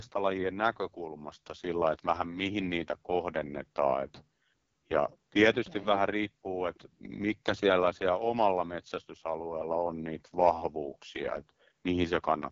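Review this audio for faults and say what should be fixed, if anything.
AMR wideband (HD Voice) codec, throughout: the speech sounds heavily rough and raspy, with nothing above 7.6 kHz. That fits the codec's lowest 6.6 kbit/s mode, where the pulse-driven vocal tract model gets too few bits to track the voice. To prevent it, run AMR-WB at 12.65 kbit/s or higher.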